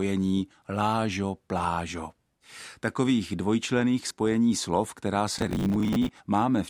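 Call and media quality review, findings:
Gritty tearing crackle riding on the speech, 5.34 to 6.09 s, right after "dvojčlených spojení slov která". Processor overload crackle. Probable component: the audio processing thread on the capture or playback host. Mechanism: the CPU missed roughly forty buffer deadlines over that stretch, consistent with buffers of about 10 ms. Each miss replayed stale audio with hard edges, and the run of them formed a burst of grit until the load eased.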